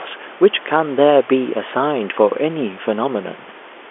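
No technical fault can be heard in this speech recording. Quiet room noise sits about 28 dB below the speech, and the sound is confined to the 300 Hz to 3.4 kHz band of G.711 telephone coding, which is what that line format passes.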